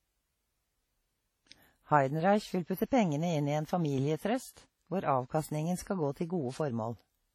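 WMA compression, across the whole clip: the speech carries heavy transform-codec damage, likely from an early Windows Media Audio encoder at a low rate, around 32 kbps. Long analysis blocks smear quantisation noise over tens of milliseconds, so the speech sounds ringing and washy, with a hiss that swells and fades along with the speech. Weaker spectral detail has been zeroed out, and nothing is present above 17.9 kHz.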